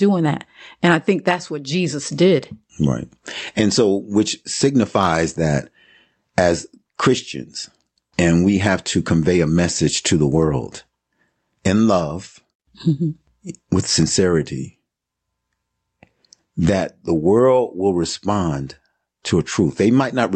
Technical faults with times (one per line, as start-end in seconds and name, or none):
none